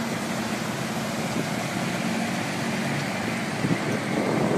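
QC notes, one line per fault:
Nothing here to flag; the audio sounds fine all the way through.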